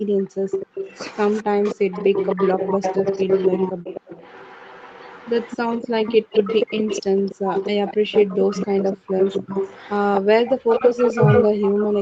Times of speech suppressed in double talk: 0.64-0.78, 1.43-1.77, 7.44-7.56, 9.19-9.41, 10.79-12.02

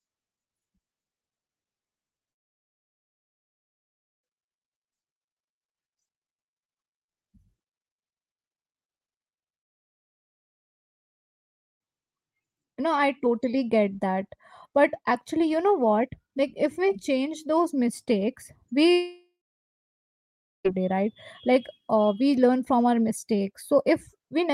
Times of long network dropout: 2.31-4.24, 9.62-11.86, 18.91-20.66

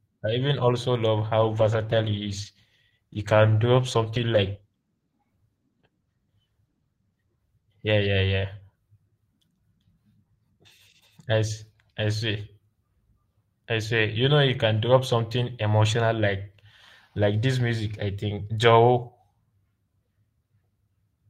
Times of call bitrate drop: 1.40-8.17

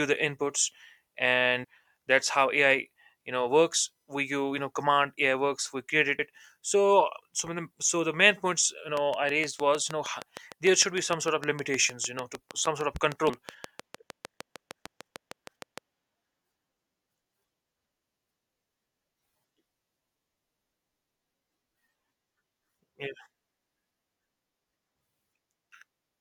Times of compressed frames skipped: 1.63, 6.16-6.19, 13.28

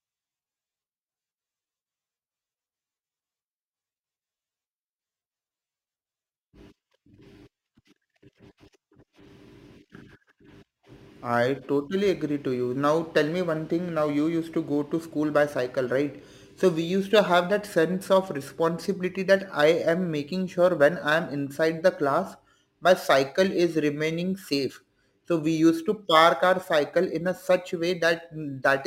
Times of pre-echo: none

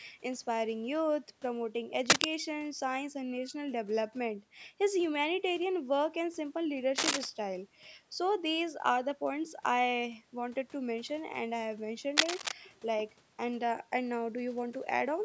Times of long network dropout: none

